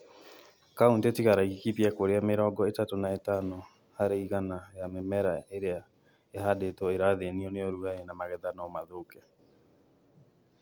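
A speech recording, and nothing technically wrong can be heard in it. There is no point in the audio that needs a time, a cause or a fix.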